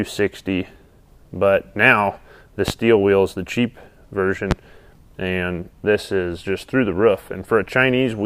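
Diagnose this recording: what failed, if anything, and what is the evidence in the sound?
Two loud pops stand out, at 2.68 to 2.72 s and 4.51 to 4.54 s, each a single sharp transient around 34 ms long and roughly 15 dB above the surrounding signal, with the sound continuing underneath. The failure is in the analogue wiring, most likely a plug contact, switch or static discharge injecting a sudden voltage step, which the downstream circuitry shaped into a brief thump superimposed on the signal.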